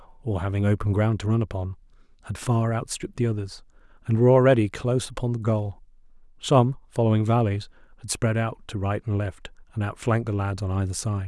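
Nothing here stands out as a technical problem; the speech carries on steadily without any glitch, dropout or disturbance catching the ear along the way.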